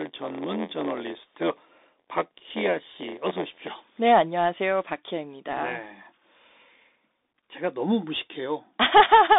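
Bluetooth CVSD headset codec, throughout: one-bit slope coding, consistent with a 64 kbit/s headset link, confines the speech to about 250 Hz–3.7 kHz, with nothing above 3.8 kHz, scratchy sibilants and granular hiss.

Block size mismatch (padded), 0.00–3.74 s: short blocks padded with zeros to fill larger reads, fitting a 512-sample block, produce an 86.1 Hz buzz and speech running 0.938 times normal speed.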